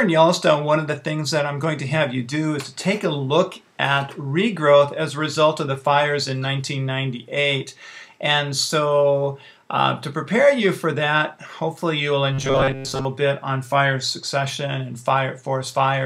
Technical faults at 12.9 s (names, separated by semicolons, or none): robotic sound from repeated short buffers